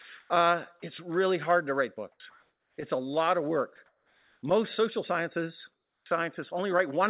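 At 0.02 s and again at 3.76 s, 20 ms of sound is dropped by the voice detector. The sender likely took it for background and stopped sending, so a short flat hiss fills the gap.

Comfort noise in place of the background appears at 0.2 to 0.3 s, 2.12 to 2.2 s (after "really hard to write"), 2.3 to 2.78 s (before "it's a lot of"), 3.86 to 4.42 s and 5.72 to 6.06 s. The real background is likely replaced with steady synthetic noise during transmission pauses. The level jumps by about −14 dB at 2.12 s, about +5 dB at 2.3 s and about −10 dB at 5.72 s.

At 6.04 s, just after "social sciences", the onset is clipped by the voice detector, likely because it reacted slowly. The first 20 ms is missing and the sound starts abruptly.

Throughout, the narrowband call path leaves nothing above 4 kHz.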